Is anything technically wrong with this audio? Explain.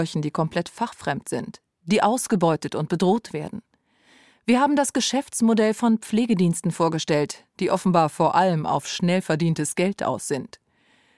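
No, no technical faults heard.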